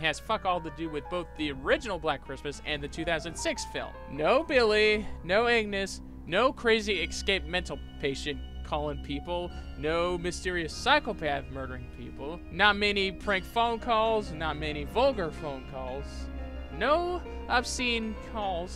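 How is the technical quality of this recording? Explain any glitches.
Nothing in this recording glitches or drops out, so there's really nothing to explain here.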